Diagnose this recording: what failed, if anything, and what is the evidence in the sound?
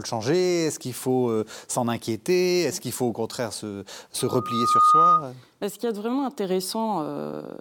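After "faut au contraire se", a 1.2 kHz tone swells from 4.19 to 5.25 s, about 10 dB over the speech: loudspeaker feedback squeal, as the microphone re-amplifies its own loudspeaker.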